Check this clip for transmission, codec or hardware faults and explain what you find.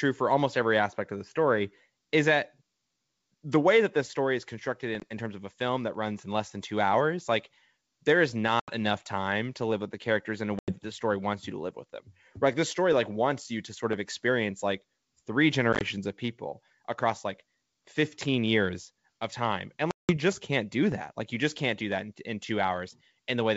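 The clip is speech carried over a G.722 wideband call at 64 kbit/s, and it has five dropouts from packet loss on an ADPCM call. They occur at 5.00–5.04 s (20 ms lost), 8.60–8.71 s (80 ms), 10.59–10.73 s (90 ms), 15.73–15.82 s (50 ms scattered in short gaps of up to 20 ms) and 19.91–20.17 s (180 ms). Each is an abrupt silent hole. Because ADPCM decodes each sample as a prediction plus a scaled difference, losing packets leaves the receiver's predictor and step size out of step with the sender's. Speech therefore resumes at a wrong level or with a click and brief distortion, and it settles within tens of milliseconds.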